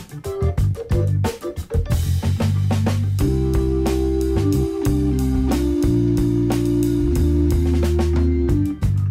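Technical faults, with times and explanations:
No technical faults can be heard anywhere in the signal, which holds steady and intact across its whole run.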